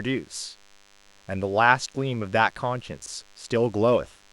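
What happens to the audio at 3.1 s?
Around 3.1 s, a short stretch from 3.02 to 3.08 s has chunks out of order. One 20 ms block of audio plays two blocks later than it should. Nothing is missing, but the sequence is scrambled. This leaves three abrupt joins where the waveform jumps. The result is a brief garbled blip. It ends just before 3.1 s.

A DECT cordless phone buzz also runs under this moment, as it does through the whole speech clip. A nearby handset or base sends a radio burst 100 times a second. The audio circuitry rectifies those bursts into sound. You hear a thin, steady 100 Hz buzz rich in harmonics. It sits faintly, roughly 35 dB below the speech.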